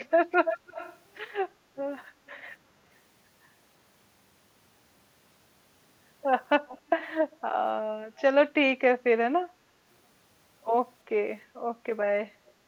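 Echo leak appears at 0.10–0.14 s, 0.31–0.99 s, 2.28–2.43 s, 6.67–7.11 s, 8.16–8.22 s and 12.47–12.51 s: a copy of the speech returning about 330 ms late, its delay creeping from 326 to 335 ms. The longest stretch, 0.31–0.99 s, is nearly as loud as the speech itself. The later scraps are quiet to barely audible. The likely cause is a far-end loudspeaker whose echo canceller let part of the microphone pickup through.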